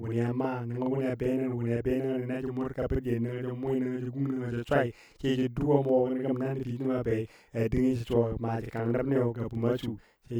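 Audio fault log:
throughout, channel delay (doubling): Every syllable of the speech arrives twice, the second copy trailing by about 42.7 ms at the same loudness, so the voice sounds doubled, like a tight slap echo. One channel is running a fixed buffer behind the other, and when both are summed to mono the late copy stands apart instead of blending. The gap fits a 2048-sample buffer at 48 kHz.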